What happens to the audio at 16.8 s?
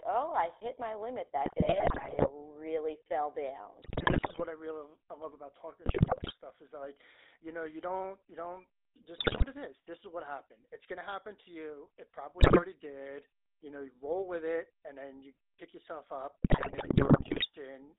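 The speech breaks into squawks, pops and gargling from 16.44 to 17.47 s. These are GSM bit errors: about 6% of bits arrive flipped, corrupting filter, pitch and gain values frame by frame. Underneath, the whole clip has the buzzy, gravelly roughness of the GSM full-rate codec, band-limited to 300 Hz–3.7 kHz, which fits a 13 kbps pulse-excited voice coder.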